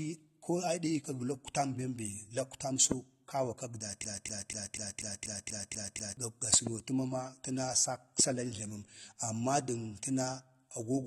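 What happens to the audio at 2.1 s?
At 2.1 s the speech sounds dull and smeared, with warbly, fizzy sibilants, as it does throughout. The likely cause is AAC compression at a low bitrate.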